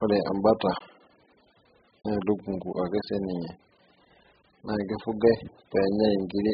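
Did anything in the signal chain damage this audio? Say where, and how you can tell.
Yes. The damage is in the codec stage, and the likely cause is AAC compression, specifically AAC-LC run at a bitrate so low that it fits something around 8 kbps. Throughout the speech there is nothing above 5 kHz, so the top end is simply missing and the sound is dull. The coder has starved each frame of bits, quantising the spectrum so coarsely that heavy smearing and a warbling, fizzy texture sit on sustained sounds and sibilants.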